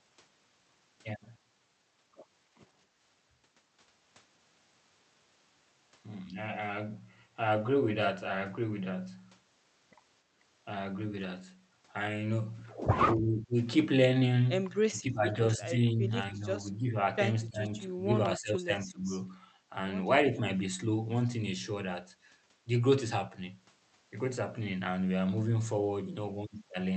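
Speech, carried over a call path whose top end stops near 8 kHz. From 2.87 to 3.0 s the room sound behind the talker dips by about 8 dB and then returns. That is background gated by the echo canceller, which clamped the microphone while the loudspeaker played. It differs from codec dropout because the signal thins rather than stutters or goes silent. Later the talker's own voice is pulled down while the far side speaks, at 13.14–13.55 s, 14.89–16.97 s and 17.47–19.11 s. The drop is around 10 dB at first and closer to 20 dB in the last stretch. This is likely speech suppressed in double talk, since the canceller could not separate the talker from the echo. Unlike gating, it attacks the voice itself.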